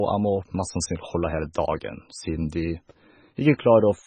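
Heavy MP3 compression runs through the whole of this speech clip, likely from a very low bitrate encode, with nothing heard above about 9.3 kHz. The encoder, starved of bits, has cut the treble at a fixed point and dropped the weaker frequency lines, and because those lines flicker in and out from frame to frame the speech takes on a watery, swirling texture, s sounds turn metallic and chirpy, and consonant onsets lose their sharpness.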